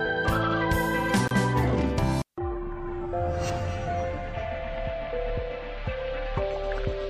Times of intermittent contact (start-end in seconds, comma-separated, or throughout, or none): 1.26-1.31